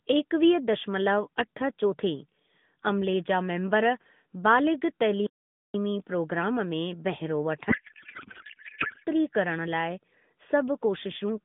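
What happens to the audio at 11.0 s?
At 11.0 s the speech carries on intact, with no dropout, click or other fault, only the narrow telephone-band sound of the AMR narrowband mobile codec running as normal.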